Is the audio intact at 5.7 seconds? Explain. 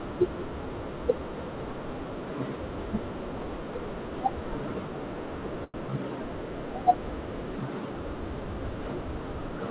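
No, a short stall from a late packet runs from 5.64 to 5.76 s. A packet of this speech arrived late, the jitter buffer ran dry, and the receiver filled the gap by stretching the last sound for about 98 ms before resuming exactly where it left off. Nothing is lost, but the sound just before the gap is held unnaturally long with a slight buzz or dip, and everything after it lands about 98 ms later.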